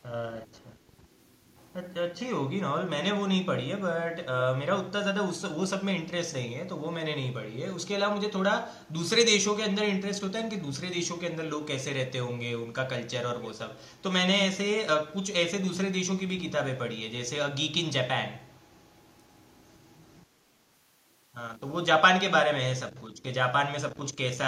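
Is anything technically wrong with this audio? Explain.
Yes, there are two brief bursts of echo leak. The far end's echo canceller likely failed to remove loudspeaker sound its microphone picked up, so a delayed copy of the speech returns. At 0.84 to 0.93 s it arrives about 451 ms late and very faint. At 13.43 to 13.51 s it arrives about 489 ms late and is much more noticeable, only around 15 dB below the speech.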